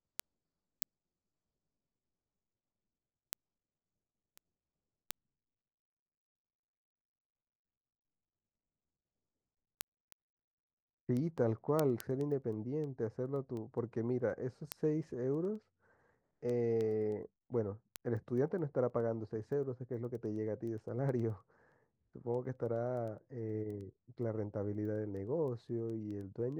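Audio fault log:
0.2 to 26.5 s, word clock ticks: the receiving device runs on its own clock, unlocked from the sender's and drifting around 200 ppm. At each slip a single sample is dropped or repeated, giving sharp ticks through the speech about ten times a second.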